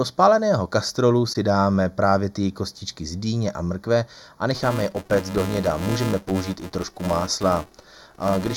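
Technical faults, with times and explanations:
Throughout, channel delay (comb filtering): the speech sounds hollow and slightly phasey, with the upper presence region thinned as if heard through a tube. One channel arrives a fraction of a millisecond late, and when the two are summed to mono, the shared content cancels at evenly spaced frequencies. With a delay this short, the first notch falls around 3 kHz, so fixed gaps sit in the upper spectrum regardless of what is said.
1.33 to 1.36 s, AAC frame loss with muting: a brief, soft-edged dropout of about 21 ms, with the sound dipping away and returning. The length fits a single lost AAC frame. The decoder filled the missing frame with silence in the spectral domain, and the overlapping transform windows on either side smeared that silence into a short fade-out and fade-in rather than a hard cut.
4.54 to 8.57 s, filter restarted on every block: a steady buzz at 375 Hz rides under the speech to the end of the clip, growing louder when the speech is louder and fading in pauses. 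A filter is discarding its memory at each block boundary and starting again from silence, so every block opens with a small transient. Those repeated starts produce the buzz, and the rate fits a 128-sample block.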